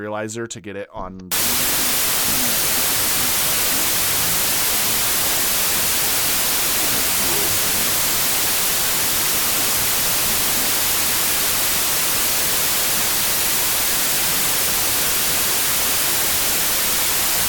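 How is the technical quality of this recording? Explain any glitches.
Pretty rough, I'm afraid. From about 1.32 s to the end there's a wrong sample width fault. The data get read in smaller chunks than they were written, which fits 32-bit samples being read as 16-bit. Each real sample turns into two values, so the speech runs at half speed, an octave low, buried under loud noise from the low-order bytes.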